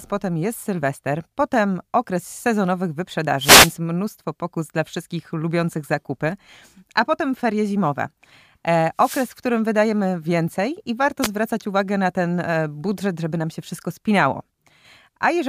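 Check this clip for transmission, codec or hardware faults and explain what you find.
The speech carries three wireless microphone noise hits, at 3.37–3.74 s, 8.97–9.32 s and 11.21–11.28 s. Each is a short burst of hissing static as the analogue FM radio link fades, with reflected paths cancelling the signal until receiver noise rises. On a spectrogram each shows as a broadband vertical smear of noise. On the waveform the envelope thickens into a dense, noisy patch over the speech.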